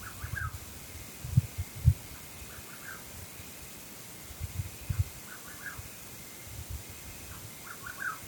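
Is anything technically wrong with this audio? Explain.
Yes. From 0.40 to 0.53 s there is a sudden gain jump: the level drops by about 4 dB from one sample to the next, likely a gain setting applied without a ramp. Unlike compressor ducking or a fade, the background noise drops in the same instant.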